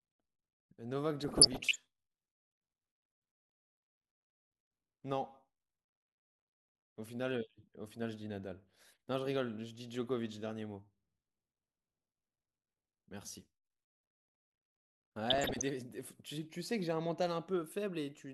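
A speech recording marred by two bursts of DAB burbling, from 1.21 to 1.76 s and again from 15.30 to 15.69 s. Weak reception has let bit errors, at a rate somewhere under 1 percent, slip past error correction into the MP2 data. Corrupted samples then put short blips of noise into individual sub-bands, and corrupted scale factors throw sub-bands up or down in level for up to a frame, with 23 and 17 frames hit in the two bursts.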